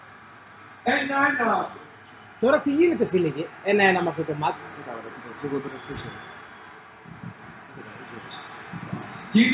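No technical fault is audible anywhere in the audio.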